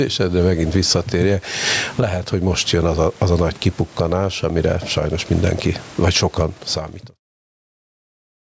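Gain pumping throughout: the gain swings roughly 15 dB as it is pulled down under loud speech, likely from excessive input gain clamped by a fast limiter.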